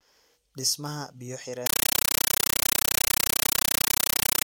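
Speech plays cleanly until 1.66 s. From there to the end, it is replaced by very loud, chattering static. This is a compressed stream played as audio. Encoded data on a digital link is being treated as ordinary samples instead of being decoded. Each frame arrives as a burst of noise lasting about 9.3 ms, then silent padding. The bursts repeat 31.25 times a second, which fits an AC-3 stream at around 448 kbps.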